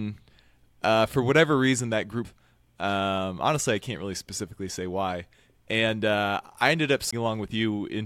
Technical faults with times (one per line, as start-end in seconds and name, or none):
2.25 CD skip
7.11 CD skip